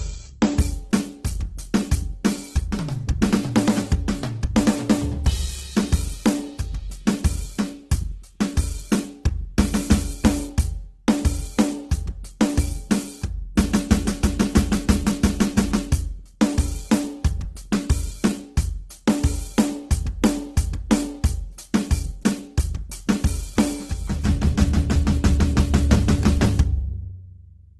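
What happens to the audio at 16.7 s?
At 16.7 s, as throughout, the music sounds grainy and rough, with nothing above 12.2 kHz, likely from heavy Opus compression at a rate near 12 kbps filling bands with noise.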